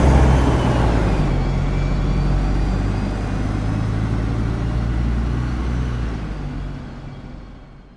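No technical faults can be heard anywhere in this recording.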